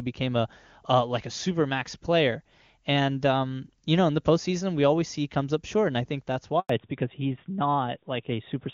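At 6.59 s, just after "and I think that's", a handover gap cuts the speech. The call switched networks and nothing arrived for 100 ms. From 6.69 s onward there is a fallback to narrowband. Everything above 4 kHz vanishes, and the clear HD Voice sound turns dull and rougher.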